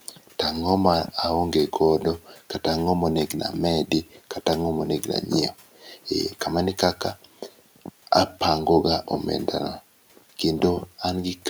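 Speech sounds swallowed and faint at 0.06–0.33 s, 2.24–2.51 s, 4.06–4.2 s and 5.75–6.07 s, dipping about 11 to 12 dB. This is speech cut by the noise suppressor, which mistook quiet speech for background and turned it down.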